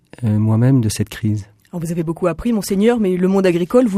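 Nothing stood out as a technical fault on listening to this clip.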